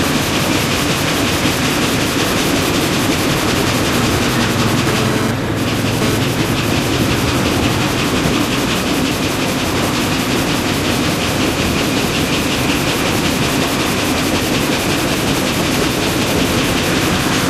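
A recording of everyday sounds carries two bursts of mobile-phone interference. From 4.87 to 6.18 s there is GSM phone buzz: a harsh, raspy 217 Hz tone rich in harmonics, at about 5 dB below the wanted sound, unrelated to it. A nearby 2G handset moving data sends radio bursts 217 times a second, and the audio circuitry rectifies them into audible pulses. From 14.89 to 16.79 s come GSM signalling bursts, a galloping dit-dit-dit of ticks and brief 217 Hz buzzes at roughly the same level. The handset is transmitting only short clusters of bursts, as it does while signalling to the network, and the same rectification makes each cluster audible.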